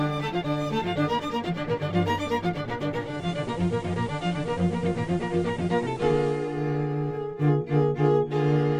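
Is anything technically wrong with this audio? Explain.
Yes. Between 2.94 and 6.68 s the radio blends from digital to analogue: it loses the digital stream and cross-fades over about 0.37 s to the station's FM broadcast, then blends back at the end. A hiss floor rises to around 30 dB below the signal. The level stays the same across both blends.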